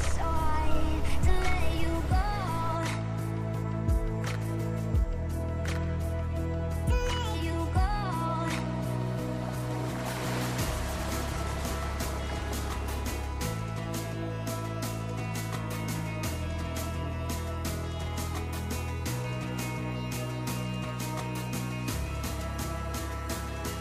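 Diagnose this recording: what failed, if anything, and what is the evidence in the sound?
Nothing here points to a failure at any stage of the chain, so there's nothing to diagnose and no evidence to chase.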